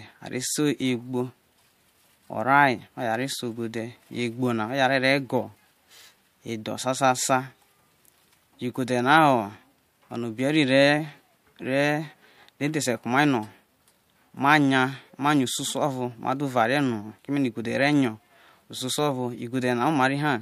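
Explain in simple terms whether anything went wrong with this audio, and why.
Nothing went wrong with this speech recording that a listener can pick out. At no point does the sound change in a way that would point to a technical problem.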